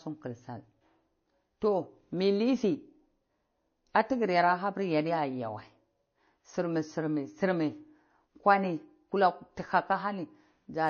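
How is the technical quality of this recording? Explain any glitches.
Quality is held back by compression damage throughout the speech. Transcoding between lossy codecs: the speech sounds muffled and swirly throughout, likely from an MP3 pass at a rate consistent with 32 kbit/s followed by a WMA re-encode. The spectrogram shows a hard ceiling at 6.6 kHz.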